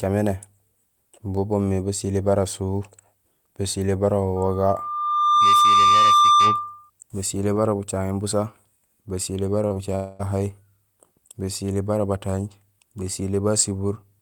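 A speech recording with three distinct faults. From 4.36 to 6.9 s, right after "basilé bara", a loudspeaker feedback squeal appears: a single 1.2 kHz tone that swells over about a second to roughly 10 dB above the speech, then stops before "basilé bara bucaŋéén busa". The microphone is re-amplifying its own loudspeaker at that frequency. A steady pure pitch that grows by itself marks it as feedback rather than network damage. Just after "bucaŋéén busa basilé bara", two short concealed packet losses smear the speech at 9.67 to 9.72 s and 9.74 to 9.77 s. Each loses 20 ms, and the decoder patches the gap by extending the preceding sound. These are brief wobbles, not a breakup. From 9.95 to 10.21 s, about 240 ms of audio is missing and is filled throughout by a synthetic continuation with no silence. This is likely a long network dropout, and it is set apart from the packet losses by a gap more than ten times longer.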